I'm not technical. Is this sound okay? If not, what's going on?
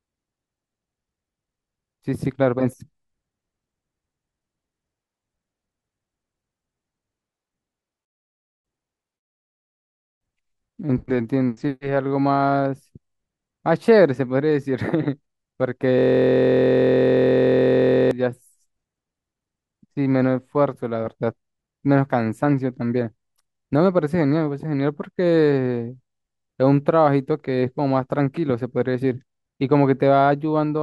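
No. From about 15.99 to 18.11 seconds there is a system hang loop. The computer froze while the sound hardware kept replaying the same tiny slice of audio, about 23 milliseconds long, roughly 92 times, which fits a 1024-sample buffer. Because the slice is so short, it repeats about 43 times a second and becomes a steady buzz. A plain electrical hum would sit underneath the speech, but here the buzz replaces it completely until the audio recovers.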